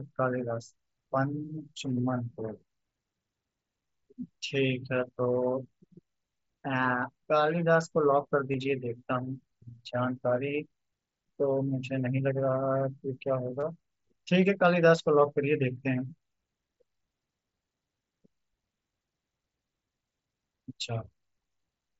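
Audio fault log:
8.52–8.54 s and 13.60–13.63 s, concealed Bluetooth headset packet loss: brief buzzy held tone, slight warble on recovery, as about 22.5 ms of lost headset audio was patched with repeated recent waveform.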